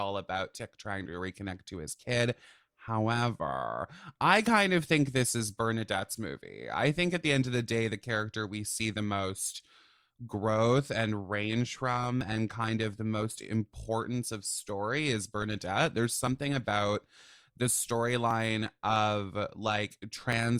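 A background task periodically blocked the USB bus or audio driver from 12.2 s, after "growth and range from", to 20.3 s. This caused periodic USB or driver dropouts, skipping about 10 ms every 1.01 s as regular ticks.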